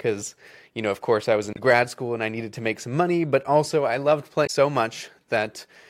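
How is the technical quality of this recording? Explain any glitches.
The recording has two glitches, both from damaged data in a compressed stream. At 1.53 to 1.59 s, between "of course I was" and "grad school and I", and again at 4.43 to 4.50 s, right after "but also I loved", corrupted bytes make the decoder misread frames and lose sync until it finds the next valid header. Each break is heard as a brief chirp, squawk, click or short hole lasting roughly 50 to 70 ms.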